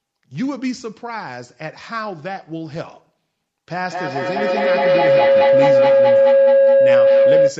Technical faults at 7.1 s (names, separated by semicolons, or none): feedback howl